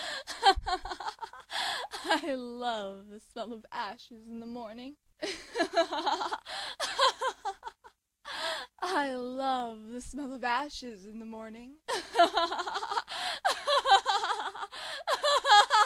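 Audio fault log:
7.10 to 12.10 s, periodic USB or driver dropouts: a regular tick every 0.25 s, about twenty in all, each where a tiny fraction of a millisecond of audio is skipped as the bus or driver stalls, leaving an audible discontinuity in the sound.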